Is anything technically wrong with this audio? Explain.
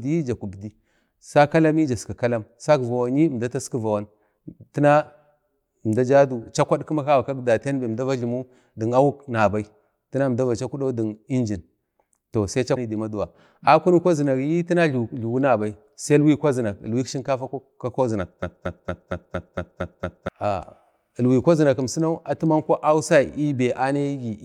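Yes, there is a broken-record loop from 18.4 to 20.3 s. The player or stream likely stalled and kept resending the last fragment it held. The same 0.23 s snippet of speech repeats eight times back to back, and the speech that should have filled that gap is lost.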